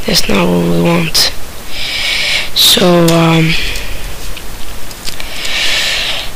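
Hard clipping runs through the whole 6-second clip: the audio was driven about 20 dB past what some stage could pass, so peaks are sheared flat. Roughly 7 percent of the signal sits at the limit, and the squared-off tops spray high harmonics, giving a harsh fuzz on every loud moment.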